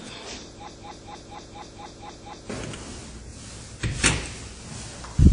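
From the start and all the way through, the sound is washy and ringing, with a hiss that swells and fades along with the signal, and nothing is present above 10.1 kHz. The damage is plainly audible. This is likely WMA compression at a low bitrate, one that fits roughly 32 kbps. The transform encoder spreads its quantisation noise over tens of milliseconds and drops weaker components, which leaves the smeared, breathing texture and the hard top-end cut-off.

From 0.68 s to 2.50 s, a fragment of about 0.24 s repeats exactly and back to back, eight times over, so the sound stutters in place like a stuck record. This broken-record loop likely comes from a stall in the player, encoder or stream, which kept resending the last piece it held. Whatever should have played during those 1.8 seconds is missing.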